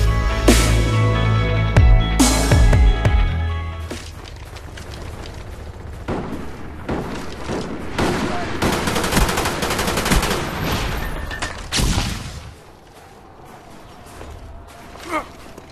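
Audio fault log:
No faults can be heard anywhere in this clip.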